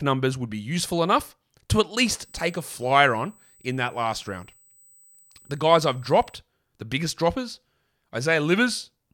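From 2.23 s, after "useful enough to at", until 6.39 s, before "the biggest droppers", a steady 8 kHz whine sits well below the speech. This is USB whine: current drawn in 125-microsecond microframes leaks through power or ground, producing a fixed-pitch tone.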